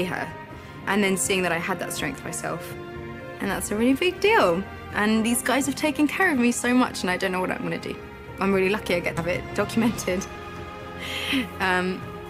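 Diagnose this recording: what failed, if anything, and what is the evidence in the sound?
Codec stage: compressed frames skipped at 9.17 to 9.22 s. About 150 ms of audio jumps past, consistent with roughly seven 20 ms frames.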